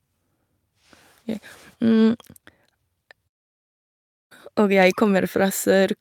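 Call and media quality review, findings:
No findings in this call and media quality review; nothing to report.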